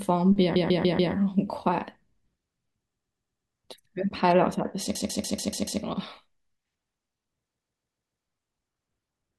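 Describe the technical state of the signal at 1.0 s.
At 1.0 s the signal is inside a burst of repeated frames running from 0.55 to 1.13 s. The same 144 ms block of coded audio is played four extra times, adding 0.58 s, and is heard as a stutter. Each 144 ms block fits about six codec frames. On a spectrogram, identical 144 ms patterns tile side by side.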